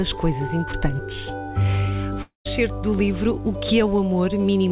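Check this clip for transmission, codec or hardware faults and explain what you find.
One real problem shows up: a long network dropout from about 2.22 to 2.47 s. The sound carries on as a fading buzz for roughly a fifth of a second, then drops to near silence before picking back up, with that stretch simply gone. That's most likely packets failing to arrive, with the receiver stretching the last audio it had to cover the hole until there was nothing left to stretch. The whole clip is band-limited with nothing above 4 kHz, which fits a G.711 A-law call path running normally.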